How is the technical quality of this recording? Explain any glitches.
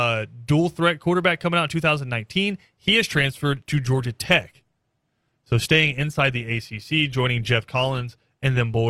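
The main issue is an adaptive stream at a lower bitrate: from 2.59 s to the end, the speech suddenly picks up more codec artefacts, with no gap. The player likely switched down when the connection slowed, which fits Opus dropping from 64 to 24 kbit/s.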